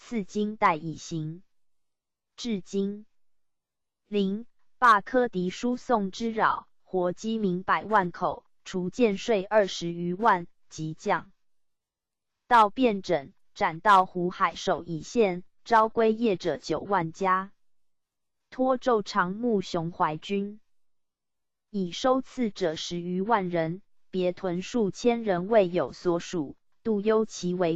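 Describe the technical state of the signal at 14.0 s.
At 14.0 s the signal is intact, with no dropout, distortion, glitch or other technical fault audible at that point.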